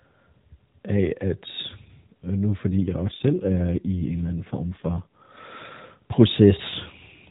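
From 2.85 to 5.22 s an AMR rate drop, fitting 12.2 to 5.9 kbps, makes the speech buzzier: spectrogram harmonics blur under the same 4 kHz ceiling, with no gap in the waveform.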